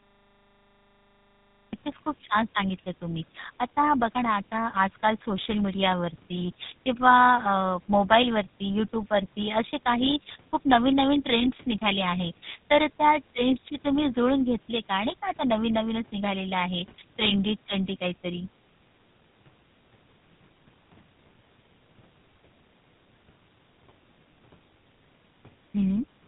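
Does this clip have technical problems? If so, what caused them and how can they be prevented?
Yes, two things. The first is a cut-off start: the clip opens on digital silence until 1.73 s, and then the speech drops in mid-sound with no natural attack. The recording or stream simply began late, so the front of that sound was never captured. To prevent it, start capture a beat before the talker begins, or keep a short pre-roll buffer running so the opening isn't lost.

The second runs the whole way through: tandem speech coding. The speech has that rough, muffled, warbly quality you get when audio is decoded and re-encoded at each network border, with every coder working on the previous one's damage. Here it sounds like two speech codecs in a row, which fits a chain like G.729A at 8 kbit/s, through G.711 A-law, into GSM full rate at 13 kbit/s. Nothing comes through above about 3.8 kHz. To prevent it, negotiate one codec end to end, or use transcoder-free operation, so the speech is only encoded once.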